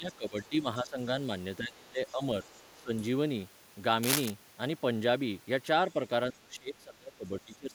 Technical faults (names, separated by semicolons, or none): speech suppressed in double talk; other side's voice leaking through; cable scratch noise